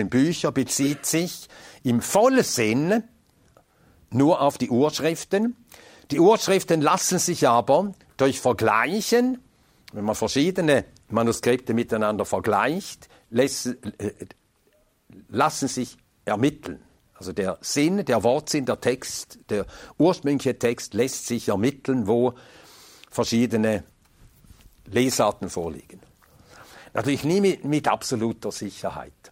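No technical faults are audible.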